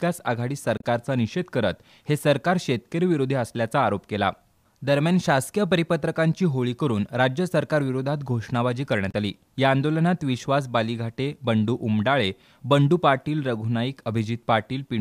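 At 0.77 s there's a short burst of damaged data in the compressed stream, lasting until about 0.84 s, and it comes back at 9.11 s for roughly 40 ms. In both spots the decoder hit bytes that didn't make sense, misread or dropped those frames and had to hunt for the next valid header before it could lock back on. You hear each one as a quick glitch cutting into the sound.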